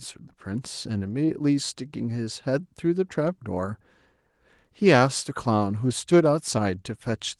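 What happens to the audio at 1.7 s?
Nothing goes wrong at 1.7 s: the speech passes through the call path intact, with no dropout, glitch or distortion at that moment.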